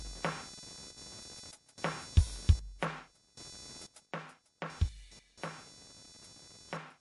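A music clip with three faults. Load changes in the computer are pushing around the audio circuit's shared ground, so computer activity noise runs throughout as a buzzy, scratchy pulsing at roughly 500 Hz, about 20 dB below the music, following the machine's activity rather than the sound. Heavy MP3 compression is the likely cause of the plainly watery, swirly texture. The treble is cut off above 11.2 kHz, and the damage points to a low bitrate of around 48 kbps, with weak detail flickering on and off and attacks smeared. One channel drops out briefly from 0.91 to 0.98 s, then again from 4.06 s to the end. The likely cause is a lost stereo channel. Shared content falls abruptly by about 6 dB, and anything present only in that channel vanishes.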